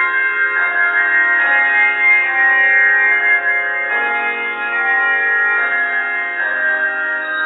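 No technical faults can be heard anywhere in this clip. There is nothing in the audio that calls for comment.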